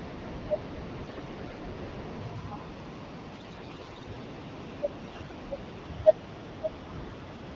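Speech coded with AMR-WB (HD Voice), sounding consistent with the clear 12.65 kbit/s mode. Three bursts of AMR bit errors make it hoarse and gargly, at 1.03 to 1.59 s, 3.35 to 4.07 s and 5.01 to 5.34 s. Pitch and level hold. Flipped low-priority bits misplace excitation pulses and skew fine gain and spectrum values. The middle burst is the roughest.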